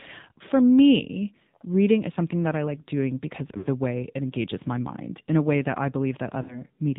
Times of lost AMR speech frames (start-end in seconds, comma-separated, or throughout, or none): 3.58-3.68, 6.42-6.62